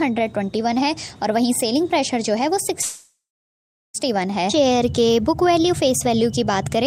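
Packets were likely held up in transit between 2.81 and 3.96 s, draining the jitter buffer and producing a call audio freeze. The receiver filled about 1.13 s by stretching the last sound into a fading buzz or hiss that settles into silence for roughly 750 ms. When delivery resumes, the audio picks up exactly where it stopped, with nothing lost. Everything after 3.96 s is simply pushed about 1.13 s later.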